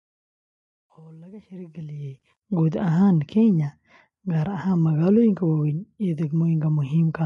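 Over the opening fade-in, from 0.0 to 2.42 s, the speech sounds gritty, worst from 0.0 to 1.11 s. This is truncation distortion on a fade: the gain stage kept only about 11 bits without dither, so the quietest part became coarse square steps.

Throughout the clip, the speech sounds rough and grainy, with noise filling the gaps between harmonics and nothing above 11 kHz. This is low-delay AAC compression, likely AAC-ELD. Its short frames resolve pitch poorly, and the plainly audible damage fits a bitrate around 32 kbps.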